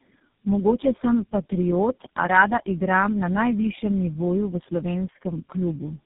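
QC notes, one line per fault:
Throughout: tandem speech coding. The speech is muffled, with nothing above 3.7 kHz. It has a rough, gritty texture and a warbly smear. This fits the audio being decoded and re-encoded through roughly four low-rate speech codecs in a row, with each stage coding the previous one's errors. The distinguishing sign is that the damage exceeds what any single narrowband coder would leave: the band limit explains part of the muffling, but not the compounded roughness and wavering tone.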